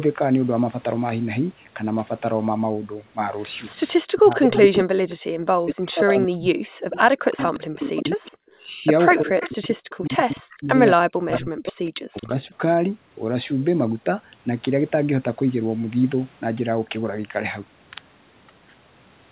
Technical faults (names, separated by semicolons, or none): speech suppressed in double talk; echo leak